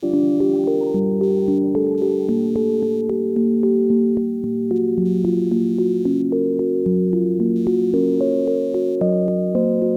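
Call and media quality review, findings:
Computer activity noise, throughout the music. Buzzy pulsing at roughly 150 per second, about 40 dB below the music, tracking machine load rather than the audio. Probable component: ground shared between the audio path and processor, graphics card or mouse circuitry. Load-driven current swings shift that ground reference, injecting the pulses.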